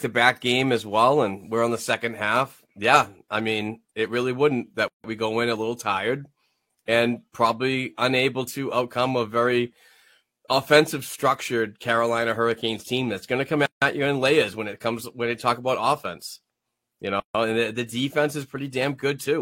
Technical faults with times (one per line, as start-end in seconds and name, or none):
4.88-5.04 gap at a join of encoded pieces
13.66-13.82 gap at a join of encoded pieces
17.20-17.35 gap at a join of encoded pieces